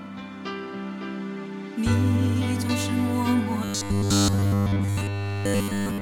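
From 3.64 s to the end at 6.01 s, the sound turns into robotic sound from repeated short buffers: a rigid, metallic buzz at 100 Hz. The likely cause is a starved stream looping roughly 10 ms fragments, replacing essentially all of the real audio.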